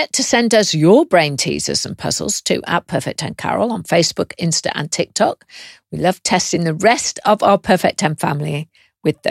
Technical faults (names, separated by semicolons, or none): none